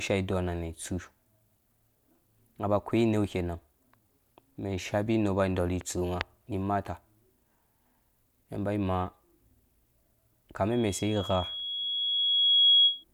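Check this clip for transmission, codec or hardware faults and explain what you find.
One hardware fault is present: loudspeaker feedback squeal. From 10.71 to 13.04 s, a 3.3 kHz tone swells over about two seconds to about 10 dB above the speech. The microphone is picking up its own loudspeaker, and the loop gain exceeds one at that frequency.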